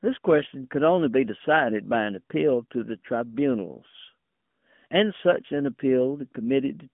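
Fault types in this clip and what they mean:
AMR narrowband mobile codec: phone-codec speech, plainly buzzy and synthetic, consistent with a rate near 10 kbps; the spectrogram shows nothing above 3.6 kHz.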